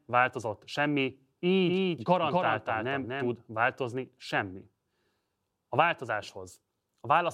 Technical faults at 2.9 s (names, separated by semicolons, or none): doubled audio track